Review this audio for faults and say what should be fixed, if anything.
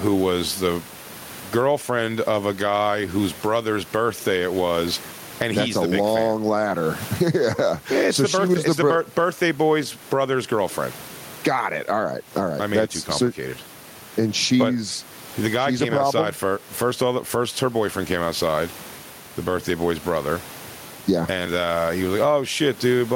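Gain pumping runs throughout: the level swings by around 15 dB, leaving the speech squashed and flat in level. The likely cause is microphone gain set far too high, with a fast limiter or compressor pulling it down on each peak. Lower the input gain and ease off the fast limiting so the level stops riding up and down.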